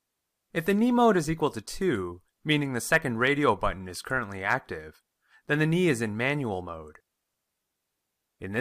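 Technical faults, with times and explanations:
No technical faults are audible in this speech recording.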